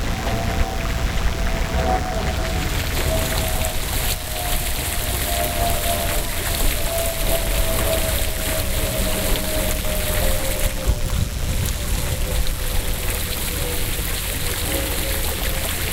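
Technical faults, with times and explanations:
Throughout, mains buzz. A steady, raspy buzz sits under the sound for the whole clip, roughly 20 dB below it. Its fundamental is 60 Hz. Sharp switching spikes from a dimmer, a rectifier or an unshielded cable get into the signal path twice in each mains cycle. Because those spikes are so narrow, they carry a long ladder of 60 Hz harmonics up to several kHz. That upper energy gives the buzz its harsh, edgy texture rather than a smooth hum.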